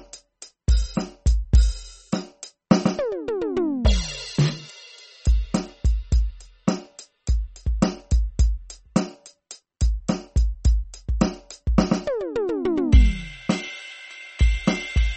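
From start to finish the music carries MP3 compression damage, likely from a low-bitrate encode, which fits roughly 32 kbps. Nothing remains above 8.4 kHz, leaving the top end dull, and starved frequency lines flicker between frames, giving a plainly audible watery, swirling texture.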